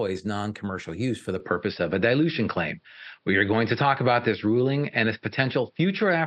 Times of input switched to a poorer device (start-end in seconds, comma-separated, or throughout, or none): 1.40-6.26